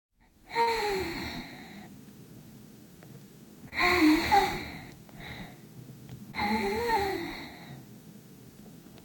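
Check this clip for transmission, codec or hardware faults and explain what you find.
Two transmission faults can be heard, both from packets missing at the receiver.

Burst of packet loss at 0.61 to 0.69 s: about 60 ms of audio never arrived, so the receiver extended the preceding sound for roughly 56 ms while fading it down. That gives a brief held, dimming tail before the sound picks up again further along, with the intervening part gone.

Short concealed packet loss at 3.69 and 6.31 s: each time about 20 ms went missing, and the decoder patched the hole by continuing the last sound, then blending back. Each patch comes across as a quick smear or wobble lasting only a couple of hundredths of a second.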